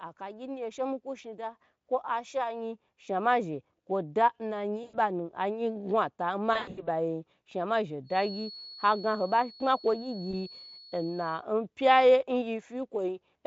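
At 4.83 to 4.99 s, just after "zhe kwo da na", VoIP packet loss concealed by the speech codec stretches the speech into a fading buzz for about 100 ms. The same fault recurs from 6.53 to 6.88 s, just before "shnuma zhe", as 200 ms of scattered gaps over roughly 240 ms. Each gap runs up to 100 ms, and the extrapolated sound stays weak and distorted. At 10.31 to 10.34 s, a single 20 ms gap is concealed the same way.

From 8.03 to 11.45 s, a feedback whistle sits behind the speech as a thin, steady 4.4 kHz tone, well below the speech and wavering slightly. It is likely caused by a loudspeaker-to-microphone loop held just short of runaway.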